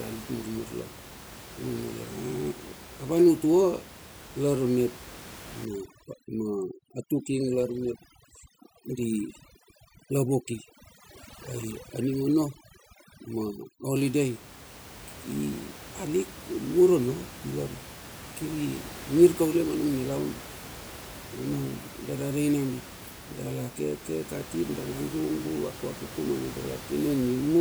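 From 5.65 to 13.96 s, overdone noise removal strips room noise into twinkling specks; a spectrogram shows scattered isolated bins.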